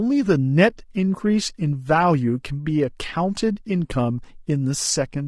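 The speech sounds rough and grainy from start to finish, with a noisy haze between the harmonics and a thin, somewhat synthetic top band. That points to likely low-delay AAC compression (AAC-ELD), whose short frames resolve pitch poorly, starved at a bitrate around 32 kbps.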